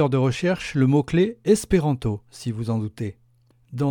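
No technical faults can be heard anywhere in this audio. There is nothing here that calls for a time mark or an explanation of a cause.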